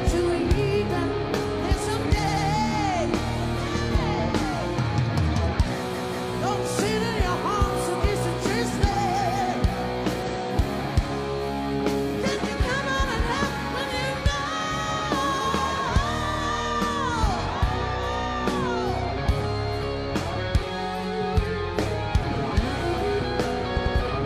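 Repeated frames make the audio stutter at 2.23 s, 5.90 s, 10.22 s and 23.73 s, replaying blocks of 92.9, 185.8, 139.3 and 92.9 ms (extra plays: two, two, one, two). Spectrograms show identical slices side by side; waveforms show copied shapes.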